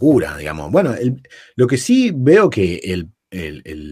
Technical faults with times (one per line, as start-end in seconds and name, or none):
none